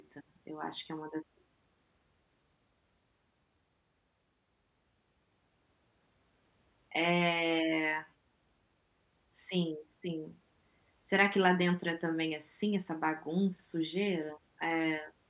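No technical faults can be heard anywhere in the speech. Nothing in the audio points to a problem at any moment.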